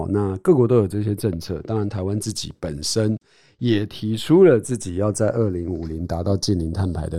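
Throughout the speech, the channels drift apart: separate clocks about 50 ppm off slide the inter-channel delay to a fraction of a millisecond, sweeping comb notches as slow flanging.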